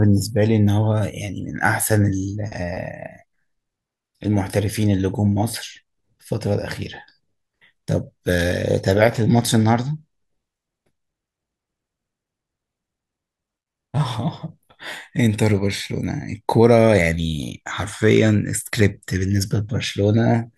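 No technical faults occur at any point in this speech recording.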